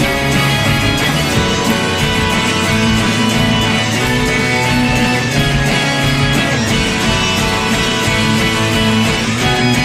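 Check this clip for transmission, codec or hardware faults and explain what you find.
No transmission, codec or hardware faults were found.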